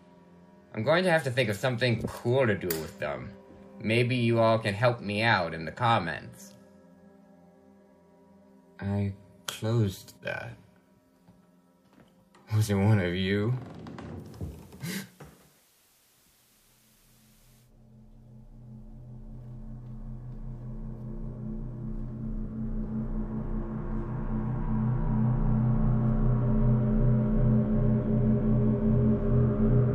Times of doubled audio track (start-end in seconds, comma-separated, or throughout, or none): none